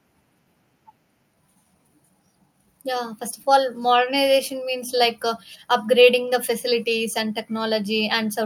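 Nothing in the recording stood out as a technical problem on listening.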